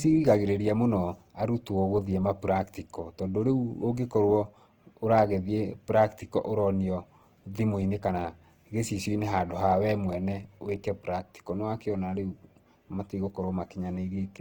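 Opus compression, likely in its music (CELT) mode, runs through the whole of this speech recording. The audio sounds plainly grainy and rough, with a noisy texture layered over tonal parts. This fits a low bitrate around 16 kbps, where the encoder keeps each band's energy but fills starved bands with folded or noise-like content rather than leaving gaps. The bandwidth is not narrowed, as content extends up to about 20.2 kHz.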